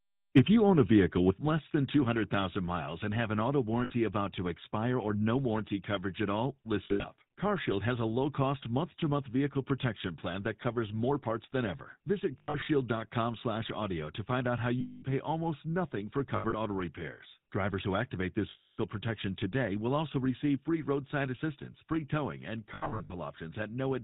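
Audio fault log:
throughout, GSM full-rate codec: plainly audible buzzy, gravelly roughness on the speech, with nothing above 4 kHz. The coder models the vocal tract and excites it with a sparse, regularly spaced pulse train, consistent with GSM full rate at about 13 kbps.
3.84–3.92 s, 6.84–7.05 s, 12.38–12.68 s, 14.80–15.04 s, 16.36–16.54 s, 18.50–18.79 s, 22.74–23.13 s, lost GSM frames: the sound is held as a rough metallic ring, because the last good frame's parameters were repeated.
Lost durations run from 60 ms to 280 ms. At 6.84 s, 12.38 s, 16.36 s and 22.74 s the losses are scattered rather than continuous, with the longest unbroken gaps around 70 to 100 ms. Landmarks: "to find out how" precedes 14.80 s, "pay almost nothing for" precedes 16.36 s, and "who activate this" precedes 18.50 s.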